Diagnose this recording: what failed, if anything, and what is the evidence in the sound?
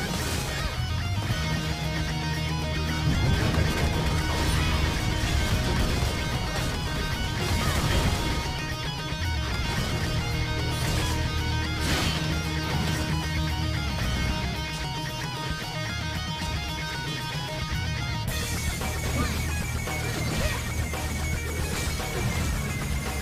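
Nothing failed at any stage of the chain, and the recording carries no audible evidence of a fault.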